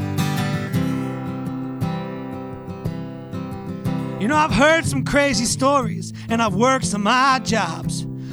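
Nothing in this recording stands out as a technical problem, so there's no fault to point to anywhere along it.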